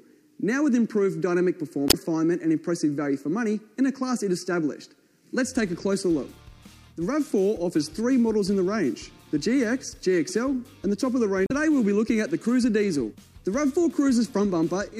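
Two spots of damaged data in a compressed stream, one from 1.87 to 1.95 s and another from 11.46 to 11.52 s, about 76 ms and 52 ms long. In both, the bytes in the encoded file went bad, so the decoder couldn't make sense of those frames and had to hunt for the next valid frame header before it could pick the sound back up. Each comes through as a brief disruption where the audio breaks off.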